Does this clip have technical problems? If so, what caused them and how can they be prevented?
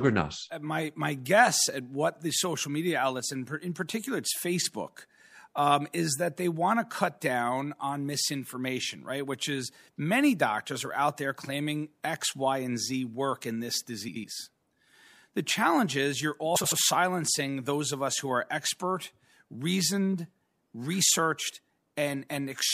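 Yes. Frames out of order occur at 14.08 to 14.25 s, just after "work in this", and at 16.56 to 16.73 s, between "challenge is you're" and "silencing those of us". In each, two adjacent runs of frames were decoded in swapped order, so a short stretch plays with its halves exchanged and sounds garbled and fluttery, with no time lost. Each half lasts about 78 ms, which fits runs of three frames. Sequence numbering with a reordering jitter buffer at the receiver would prevent this.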